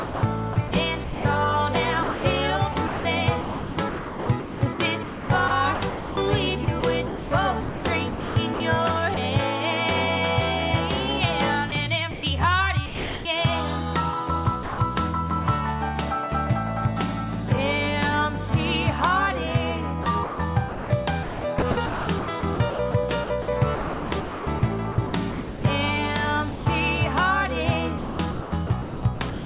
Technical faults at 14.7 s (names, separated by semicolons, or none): sound dropped by the voice detector